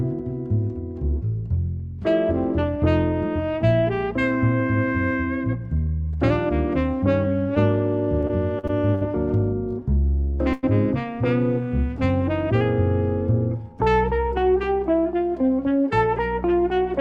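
From 8.21 to 9.03 s there is repeated packet loss, the robotic kind. Five short gaps, the longest 64 ms, are each filled by extending the preceding sound, covering about a fifth of the stretch. The result is choppy rather than one clean dropout.

At 10.53 to 10.65 s a single burst of packet loss leaves a hole of about 100 ms. Unlike the earlier stretch, this is one continuous gap. The last sound is stretched and fades out, then the audio resumes further on with that portion missing.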